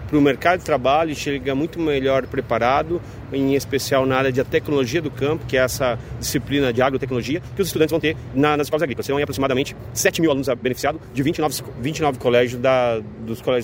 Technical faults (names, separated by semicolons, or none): time-stretched section